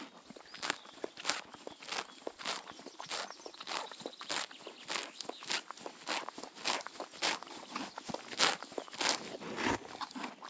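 Nothing technically wrong turns up anywhere in this recording of sounds.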